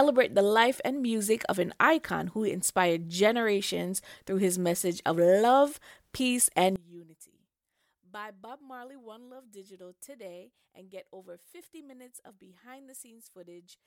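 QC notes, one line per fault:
6.76–13.86 s, one channel inverted: after "of love peace and", everything drops about 22 dB. Likely cause: one polarity-reversed channel cancelling their shared content when summed to mono.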